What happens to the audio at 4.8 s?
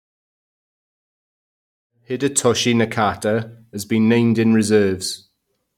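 Nothing goes wrong at 4.8 s: the speech carries on intact, with no dropout, click or sudden change in level.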